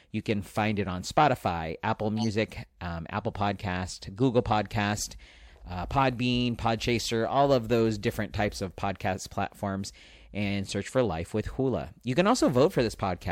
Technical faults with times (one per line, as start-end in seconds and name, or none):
2.17-2.27 corrupt frame decoded
4.17 corrupt frame decoded